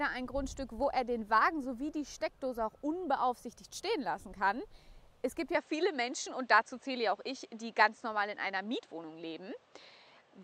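At 5.55 s the sound abruptly narrows and stays that way to the end, with no gap at the change. Everything above 8.3 kHz disappears, the tone turns duller, the level shifts by about 5 dB, and a faint new background noise appears well beneath the signal. The likely cause is an input switched to a poorer device mid-recording. On a spectrogram the upper band is cut off sharply at 5.55 s, and the waveform envelope steps to a new level there.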